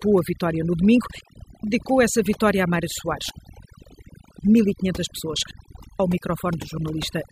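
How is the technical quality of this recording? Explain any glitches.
The technical quality is poor: heavy processing affects the whole recording, and the sound cuts out three times.

Overdone noise removal runs through the entire speech clip. A noise reduction stage set far too aggressively pushes individual frequency bands down or off whenever they resemble its noise estimate, and quieter parts of the voice get swallowed along with the hiss. The background collapses to near silence dotted with twinkling specks. Unlike codec smearing, the artefacts here track the noise floor, so they are most exposed in pauses.

Digital wireless dropouts occur three times. The first runs from 1.21 to 1.63 s (about 0.43 s), between "a vitória no domingo" and "essa vitória a". The second runs from 3.30 to 4.38 s (about 1.08 s), and the third from 5.51 to 6.00 s (about 0.49 s). Each time, the receiver lost too much data from the link and muted itself with a very quick fade. 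What separates this from analogue radio dropout is the clean hole: near silence with no burst of static or noise on either side.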